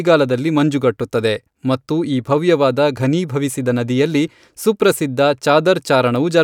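No technical faults turn up anywhere in this speech recording, so there is nothing to time or trace.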